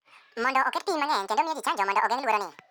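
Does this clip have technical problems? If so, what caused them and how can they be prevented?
Yes. Throughout, the speech plays at double speed and an octave high, 12 semitones up. This is audio read two samples at a time: the reader treated sample pairs as single frames, so the rate doubled. Prevent it by matching the reader's channel count and sample width to the file header.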